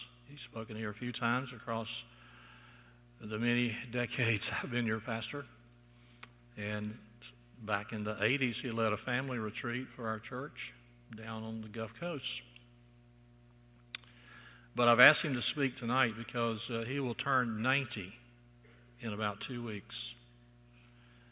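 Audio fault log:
No faults are heard anywhere in this clip. There is nothing to log for it.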